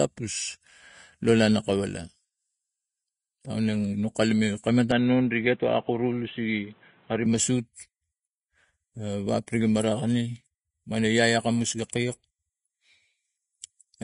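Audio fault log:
Throughout: Vorbis compression. Nothing is heard above 10.6 kHz. The treble is hissy and grainy, with roughened tones and smeared attacks. The codec has quantised fine detail into noise. The damage is plainly audible, which fits a low bitrate near 29 kbps.
4.92 to 7.26 s: input switched to a poorer device. The sound abruptly turns dull and boxy, with nothing above 4 kHz, then clears again. There is no gap at either switch. A faint new noise floor appears, well below the signal, while loudness stays about the same. The cause is likely a narrower-band microphone or headset taking over.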